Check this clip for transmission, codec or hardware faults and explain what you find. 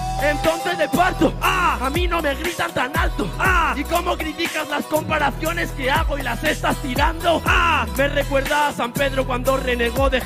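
Three brief codec faults are present. Corrupt frame decoded at 3.91 s, 5.85–5.91 s and 6.96–7.01 s: a couple of damaged frames each time, decoded regardless, scatter energy to wrong frequencies, giving short chirp- or noise-like disturbances, the first the quietest.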